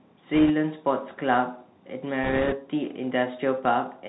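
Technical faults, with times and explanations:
Throughout: Bluetooth CVSD headset codec. Nothing above 4 kHz, scratchy s sounds and a grainy hiss, which fits the 64 kbps one-bit up/down coder struggling with its step size.
0.34–0.51 s and 2.24–2.55 s: bit errors on a Bluetooth voice link. Rushing crackle with no sharp clicks, since each flipped bit barely moves the signal; the second burst is roughly twice as dense.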